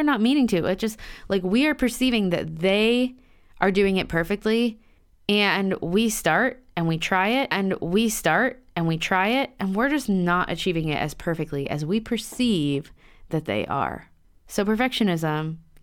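A stream segment repeated from 7.50 to 9.50 s, just after "and we try it": the player queued the same chunk of the stream twice, so about 2.0 s of speech plays again, with a small blip at the jump back, before "and we're just not" follows.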